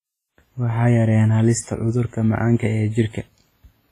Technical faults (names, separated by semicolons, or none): WMA compression